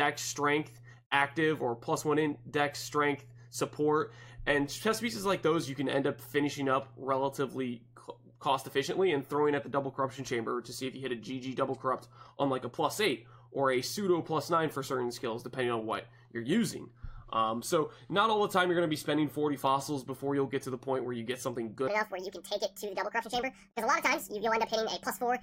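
At 21.88 s the audio shifts into a section at the wrong speed, running through to the end at 25.42 s. Playback here is about 1.63 times faster than normal, so tempo and pitch jump together, with pitch raised by roughly ten semitones. The sound turns abruptly high and hurried. The change is most likely a clock mismatch at that point, where this segment was played or rendered at a rate faster than the one it was recorded at.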